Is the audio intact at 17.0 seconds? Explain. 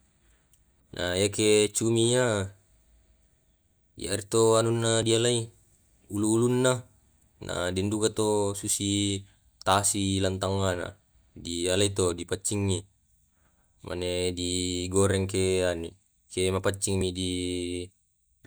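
No. There is audio missing between chunks at 17.01 s, a single skip where a very short slice of sound, only a few milliseconds, drops out and the audio on either side is butted together with no gap of silence. The likely cause is a recorder or processor handling the audio in 6.0-second blocks and losing a sliver of samples while closing one block and starting the next, so the sound jumps abruptly.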